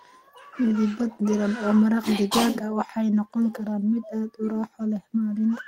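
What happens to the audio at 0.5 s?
Nothing goes wrong at 0.5 s; the speech plays through that moment intact, with no dropout, click or distortion.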